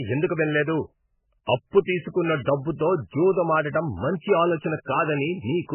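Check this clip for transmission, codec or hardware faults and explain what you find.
One codec fault runs through the whole recording: low-bitrate audio saved at a high bitrate. The speech has nothing above 3 kHz and carries the smeared, watery coarseness of a very starved encoder. The likely cause is an MP3 made at a bitrate as low as 8 kbit/s and later re-encoded as a high-bitrate MP3, around 192 kbit/s. The second pass preserves the damage faithfully, but it cannot rebuild the discarded high band or undo the first encoder's artefacts.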